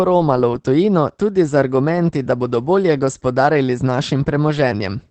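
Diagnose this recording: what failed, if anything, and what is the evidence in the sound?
The codec stage failed: the speech went through Opus voice compression at a low rate, and the damage is plainly audible from start to finish. The encoder stayed in its SILK linear-prediction mode and held the band to wideband, so nothing above about 8 kHz survives. The excitation is coded coarsely, leaving the voice muffled, hoarse and faintly robotic throughout, which fits a bitrate of around 12 kbps.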